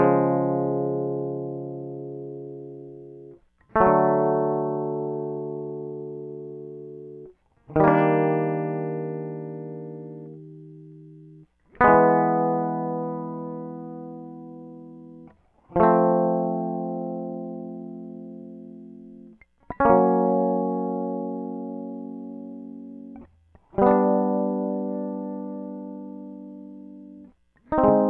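Music, with no audible technical faults anywhere.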